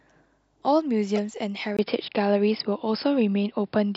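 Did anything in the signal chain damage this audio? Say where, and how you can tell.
Yes. Corrupt frame decoded, 1.16 to 1.19 s, at the codec: a brief error peaking around -20 dBFS across a few frames, as damaged bits put energy at the wrong frequencies.

Input switched to a poorer device at 1.77 s: a 20 ms silence, then duller sound with nothing above 5.2 kHz, a small level change and new faint noise, likely from a narrower-band microphone.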